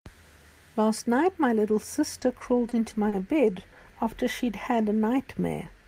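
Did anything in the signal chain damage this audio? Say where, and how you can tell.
Yes, the damage happens at the network receive end, in the jitter buffer. There are three short stalls from late packets, at 2.19, 2.69 and 3.09 s, each lasting roughly 40 to 50 ms. In each one the speech hangs on a sound a touch too long, with a faint buzzy hold, then picks up exactly where it stopped. The buffer ran dry, and the receiver stretched the last sound for 20, 20 and then 30 ms until the packet arrived. Nothing is lost, but each stall adds that much delay.

The same buffer then does a slow-down from 4.05 to 5.01 s. The speech drags to about 93% speed while the pitch stays put, so sounds feel drawn out. After those stalls the receiver was rebuilding its reserve by repeating single pitch periods and bits of pause over and over. That slipped in 76 ms of extra audio across that second.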